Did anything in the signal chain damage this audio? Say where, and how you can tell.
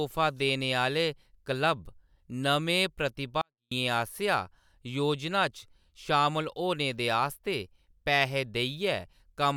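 Yes. A 24-bit alignment error (too quiet) occurs at 3.41 to 3.71 s, before "आसेआ योजना". In sample-format conversion, 24-bit samples read as 32-bit drop the clean speech about 48 dB.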